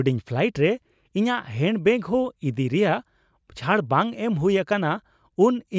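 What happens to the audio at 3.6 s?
Nothing goes wrong at 3.6 s; the speech carries on intact through that moment with no dropout, click, distortion or other fault.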